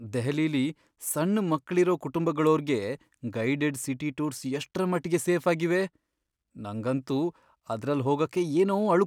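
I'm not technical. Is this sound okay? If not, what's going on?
Yes, no faults are audible anywhere in this speech recording.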